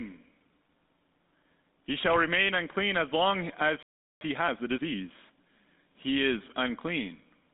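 The speech passed through a GSM full-rate codec, consistent with a 13 kbps stream, so nothing above 3.7 kHz survives, and the coarse pulse excitation leaves a plainly audible buzzy, gravelly roughness throughout. At 3.83 s, right after "unclean as long as", there is a playback stall, likely from the player running out of data: the sound cuts off mid-flow and stays silent for about 385 ms until 4.21 s. A time-compressed catch-up follows from 4.21 to 4.97 s. The player cuts and cross-fades small pieces to clear its backlog, so the speech rushes at 1.5 times normal speed, keeping its pitch.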